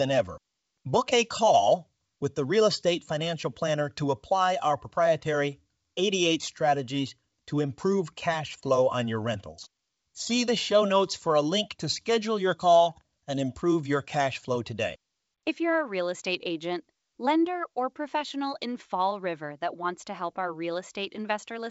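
No technical faults can be heard in this recording.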